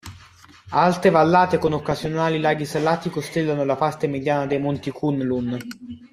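From 1.62 to 2.07 s, before "laghi salati costellano la", and from 4.46 to 4.83 s, after "costellano la parte mediana", DAB burbling adds short blips of noise. Stray bit errors beat error correction, putting noise into single MP2 sub-bands, seen as patchy bright blocks on a spectrogram.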